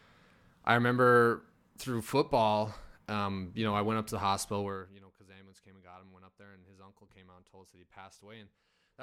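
No faults found in this speech recording; nothing to report.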